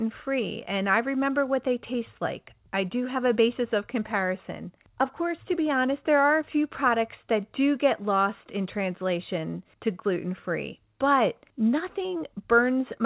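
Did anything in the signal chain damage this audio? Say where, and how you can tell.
No, nothing damaged this audio.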